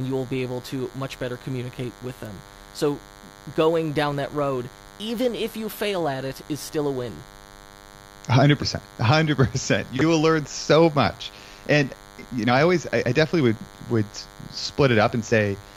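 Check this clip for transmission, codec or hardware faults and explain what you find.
A DECT cordless phone buzz runs under the speech for the whole clip. A DECT handset or base station close to the recording chain transmits a short radio burst every 10 ms, and somewhere in the audio path a junction rectifies that RF into a pulse train. The result is a thin, steady 100 Hz buzz with a dense stack of harmonics, sitting roughly 25 dB below the speech.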